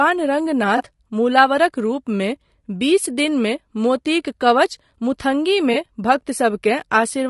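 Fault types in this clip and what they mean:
Low-delay AAC compression: The speech is rough and grainy throughout, with noise filling the gaps between harmonics and a thin, synthetic-sounding top band. This is likely AAC-ELD, whose short frames resolve pitch poorly, and the damage level fits a bitrate around 32 kbps.
AAC frame loss with concealment: Two brief smeared, noisy patches, at 0.77 to 0.83 s and 5.73 to 5.76 s, where about 20 ms of signal went missing, consistent with a single dropped frame each time, and the decoder patched the gap from the preceding spectrum.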